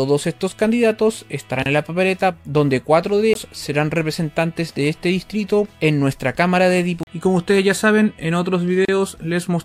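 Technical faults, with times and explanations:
1.63–1.66 s and 8.85–8.89 s: gap at a join of encoded pieces. Continuous sound drops out for 33 ms. Untrimmed encoder delay and end padding leave silence where the pieces meet.
3.34 s and 7.03–7.07 s: CD skip. A very brief mute, then the sound jumps. The laser has leapt to another turn of the disc's spiral.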